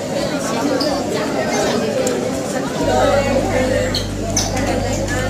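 At 2.84 s, mains hum comes in and stays to the end. It is a steady 50 Hz tone, sitting only a little below the sound itself. A ground loop or nearby transformer has let the power line leak into the signal path.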